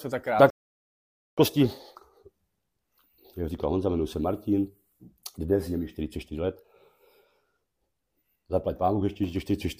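A playback stall cuts the sound off at 0.50 s, and the output stays silent until 1.38 s, a gap of about 0.87 s before the audio picks up again. The break comes abruptly in mid-flow rather than as a fade. This is most likely the player running short of data, or its playback thread being held up, so that nothing reached the output until the supply was restored and sound resumed.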